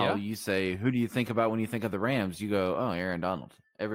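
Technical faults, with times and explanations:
Nothing technical stands out here; the speech comes across steady and intact with nothing to flag.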